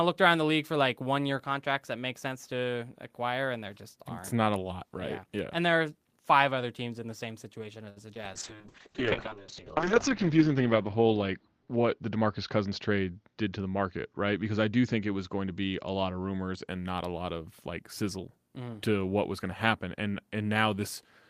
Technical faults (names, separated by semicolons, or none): short stall from a late packet; short concealed packet loss; call bitrate drop; jitter buffer speed-up